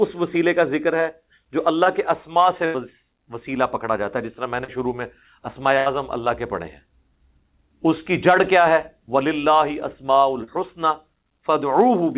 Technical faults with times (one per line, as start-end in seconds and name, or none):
1.84-1.87 short concealed packet loss
2.65-2.76 burst of packet loss
4.64-4.70 short concealed packet loss
5.78-5.88 burst of packet loss
10.44-10.49 short concealed packet loss